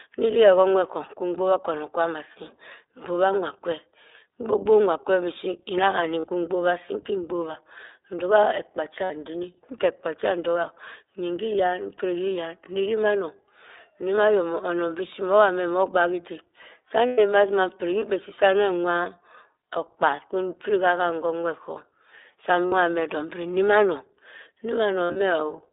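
The whole clip runs through the iLBC codec. The line band sits at roughly 300 Hz to 3.7 kHz, so there's no top end at all, and the speech has that slightly rough, synthetic edge, plainly audible, that fits iLBC's 15.2 kbps mode with 20 ms frames. Each frame's excitation gets coded independently.

Then there are six spots of lost iLBC frames, where the decoder fills the gap by repeating the last pitch cycle with some noise mixed in. At 6.2 s there's a 40 ms patch, cleanly recovered right before "kwi mgbobha asii". At 9.04 s a 60 ms gap sounds like a brief held vowel, and at 14.17 s there's a tiny 20 ms one. Just after "meh nnogbak idik sah", at 17.07 s, a 120 ms stretch gives a longer, buzzy sustain that fades toward the end. At 22.66 s there's another 60 ms hold. Near 25.0 s, 120 ms of loss is scattered across 160 ms, with the longest run around 70 ms, so it sputters rather than holding steady. 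Each time, the voice snaps straight back because the frames stand alone.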